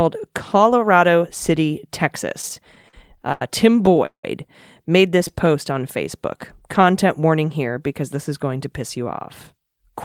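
Late packets repeatedly drained the jitter buffer in this speech recording, so the receiver stretched the last sound to cover each gap, giving repeated stalls (stutter) at 2.41–3.42 s, 3.86–4.24 s (one hold of 176 ms) and 5.18–5.48 s. A jitter buffer slow-down from 5.34 to 6.92 s then repeated pitch periods to rebuild the buffer, adding 109 ms, so the speech drags at 94% speed with unchanged pitch just before "warning here because this". At 9.52–9.94 s a jitter buffer speed-up trimmed around 50 ms of pitch periods to shed excess delay, and the speech runs hurried at 110% speed.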